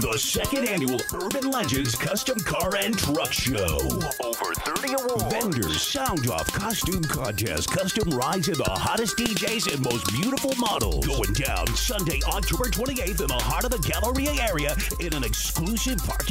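No technical faults are audible.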